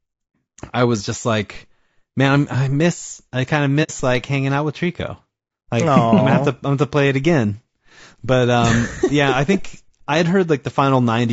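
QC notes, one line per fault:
throughout: low-delay AAC compression. The speech sounds rough and grainy, with noise filling the gaps between harmonics and a thin, synthetic-sounding top band. This is likely AAC-ELD coding at a low bitrate, around 32 kbps. Its short frames resolve pitch harmonics poorly.
3.83 to 3.91 s: AAC frame loss with muting. Between "miss I kind of" and "like hanging out with", the sound fades out into a soft-edged silent hole and fades back in. About 60 ms is missing, which fits two lost frames zeroed by the decoder, with the overlapping windows smoothing both edges.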